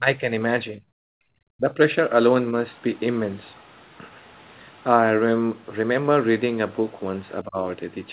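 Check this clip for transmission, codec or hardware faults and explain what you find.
The speech carries three echo-canceller faults. Its top end stops near 4 kHz, consistent with the narrowband call codec.

Speech suppressed in double talk occurs at 0.0–0.3 s, 0.74–0.81 s, 1.57–1.79 s and 7.43–7.61 s. The talker's level dips, most likely because the canceller mistook near-end speech overlapping far-end audio for echo and attenuated everything. Drops are around 10 dB at the first two spots, roughly 25 dB at 1.57 s and about 15 dB at 7.43 s. The waveform envelope pinches inward, and the spectrogram shows a brief vertical fade across the speech band.

Background gated by the echo canceller appears from 1.09 to 1.29 s. While the loudspeaker played, the suppressor clamped the microphone, cutting the room tone by about 37 dB for a fifth of a second before releasing. The noise floor falls away abruptly and returns. 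On a spectrogram the faint broadband background shows a dark rectangular notch, and the waveform drops to near-flat between sharp edges.

Other side's voice leaking through is heard at 2.72–2.99 s, 3.45–3.81 s and 4.03–4.14 s. Faint scraps of a second talker remain, likely residual loudspeaker echo the canceller did not fully subtract. They sit very low, around 40 dB below the main speech for the first two and nearer 35 dB at 4.03 s. A spectrogram shows weak, disjointed harmonic traces beneath the main voice, and the waveform shows small low-level ripples in gaps.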